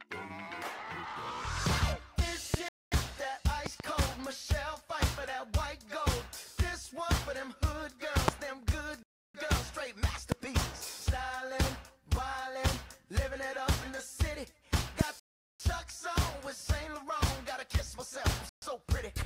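A loud pop comes at 2.54 to 2.56 s, a sharp pulse roughly 20 dB above the sound, most likely a voltage spike from a switch, plug, static or driver glitch added onto the signal, which carries on beneath it. A Bluetooth stall follows at 2.69 to 2.92 s: the sound cuts to 234 ms of silence and then resumes, likely as the headphone buffer runs dry while interference holds back packets until they are resent. A double pop lands at 3.66 to 3.82 s, two quick thumps about 15 dB up. A louder single pop, around 25 dB above the sound, strikes at 8.28 to 8.31 s, then a 315 ms stall at 9.03 to 9.34 s. Further pops of about 20 dB hit at 10.32 to 10.34 s and 15.01 to 15.03 s. The longest stall, 402 ms, runs from 15.20 to 15.60 s, and a short 128 ms dropout closes things at 18.49 to 18.62 s.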